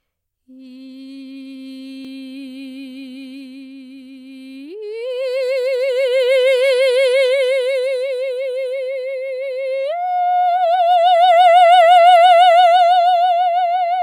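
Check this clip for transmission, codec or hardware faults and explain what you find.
One fault is present in this music clip. From 2.05 to 2.08 s there is a small skip as about 32 ms of music goes missing and the waveform jumps. This is an overlap between stream segments: two 6-second segments claimed overlapping time stamps, so the player trimmed that shared stretch from audio that was never actually duplicated.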